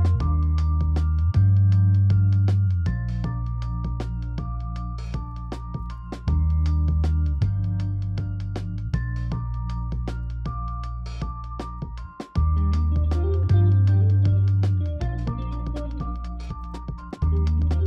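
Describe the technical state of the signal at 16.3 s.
At 16.3 s the audio sits inside a time-stretched section running from 15.05 s to the end of the clip at 17.87 s. The likely cause is software compressing this stretch to fit a shorter length, running it about 1.56 times faster while holding pitch by discarding short slices of the signal. As a result, the pace jumps abruptly at 15.05 s with no change in pitch, and the sound turns rushed.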